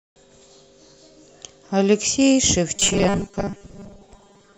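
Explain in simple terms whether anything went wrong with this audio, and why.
At 2.76 seconds the speech turns into a stiff, metallic buzz. It lasts until the end, at 4.58 seconds. This is robotic sound from repeated short buffers. The buzz sits at a fixed 200 Hz, no matter how the voice moves. The likely cause is audio arriving too slowly. The player fills each gap by repeating the last tiny slice, about 5 ms long. That happens for roughly two thirds of this stretch, so much of the real speech is skipped.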